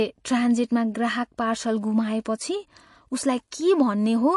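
Speech, carrying plainly audible MP3 compression artefacts throughout, with nothing above 11.2 kHz. The top is cut off cleanly, but what sets this apart from a simple low-pass filter or a narrow-band channel is the watery, swirling texture below the cut-off. Weak spectral detail flickers on and off between frames, and s sounds turn chirpy and metallic. The damage fits a bit-starved encode, likely around 48 kbps.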